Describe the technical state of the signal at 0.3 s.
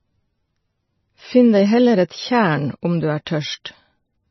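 At 0.3 s the speech is already carrying the damage that runs through the whole clip: nothing above about 5.9 kHz, and a watery, swirly quality where weaker detail flickers in and out. That's most likely MP3 compression at a very low bitrate, somewhere around 22 kbps by the sound of it. Starved of bits, the encoder lops off the treble at a fixed point and drops quieter frequency lines frame by frame, which is what makes s sounds chirp and onsets smear.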